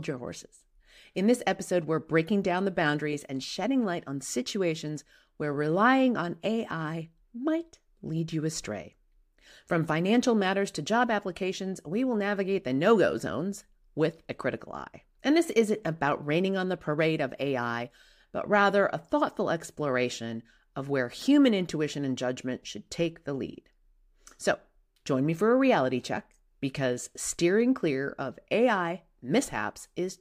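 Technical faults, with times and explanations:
No technical faults are present.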